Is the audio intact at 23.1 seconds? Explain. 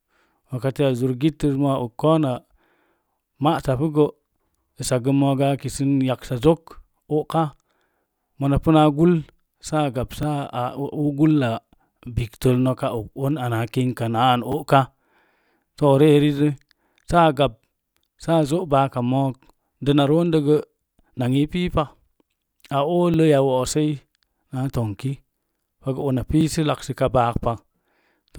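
No. A repeated buffer occurs at 23.14 s: fresh audio missed its deadline, so the device played the previous 10 ms block once more. With such a short block, the speech gets a hard-edged click or brief buzz, and essentially nothing is skipped.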